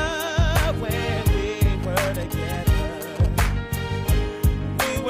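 From 1.83 to 3.26 s, GSM signalling bursts from a nearby phone, rectified, give galloping ticks and brief 217 Hz buzzes, not a steady hum.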